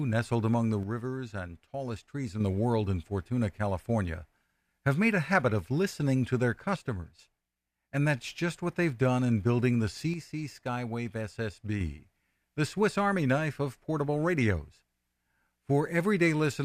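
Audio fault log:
0.83–2.40 s, 6.76–7.94 s and 10.14–11.81 s, one channel drops out: after "nestled among the", "of listening to their" and "done in building the", the speech suddenly falls about 6 dB, then snaps back, likely because one stereo side vanished and the mono sum kept only half.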